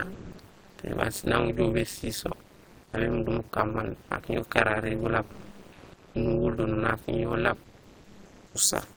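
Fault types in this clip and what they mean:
Overlap-add ripple: the frames were put back together with an overlap that doesn't sum to a flat gain, so the level swings by about 60 dB roughly 200 times a second. That gives the whole clip a metallic buzz with extra tones around each note.
Comfort noise in place of the background: in six pauses, from 0.12 s (just before "té baan sinaŋ") to 8.54 s, the real room sound is swapped for a steady, featureless hiss that shifts level by up to about 4 dB, likely from discontinuous transmission.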